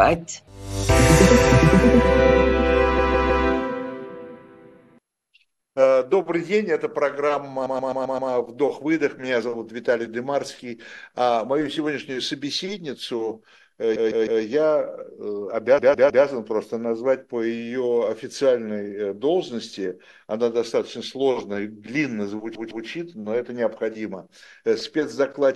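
Repeated frames make the audio stutter at 2.98, 7.66, 13.95, 15.78 and 22.55 s. Blocks of 131 to 157 ms replay two to five extra times.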